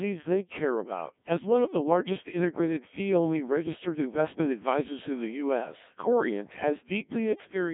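The whole clip runs through a Codec 2 vocoder, which fits a rate near 1.3 kbit/s. The speech is rebuilt from sine waves, so it's buzzy, robotic and cut off above 3.7 kHz.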